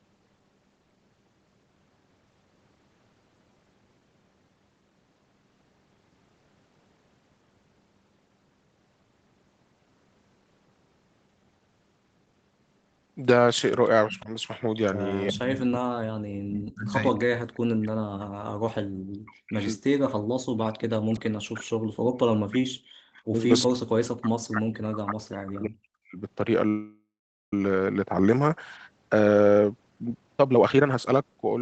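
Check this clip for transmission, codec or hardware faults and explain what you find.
Yes, four kinds of fault are audible, and most of the trouble falls in the second half of the clip.

Speech suppressed in double talk: The voice ducks by about 15 dB at 14.08–14.31 s, then drops by up to about 40 dB or breaks into pieces at 15.32–16.56, 16.72–19.68, 20.01–23.46 and 23.65–26.18 s. This is likely an echo canceller that couldn't separate the talker from the far side and turned both down.

Echo leak: A delayed copy of the voice comes back 361 ms late. It sits about 25 dB below the speech at 14.1–14.2 s and about 15 dB below at 16.51–16.72 s. The likely cause is a loudspeaker echo that the canceller didn't fully remove.

Call audio freeze: At 26.68–27.53 s the sound stretches into a fading buzz that goes silent for about half a second. The speech then resumes where it stopped, 0.84 s late, with nothing lost. 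Delayed packets likely emptied the jitter buffer.

Jitter buffer speed-up: From 29.15 to 31.57 s the speech runs hurried at 129% speed with its pitch unchanged, and roughly 0.7 s is cut out. The receiver was trimming pitch-period slices to shed the extra delay that had built up in its buffer.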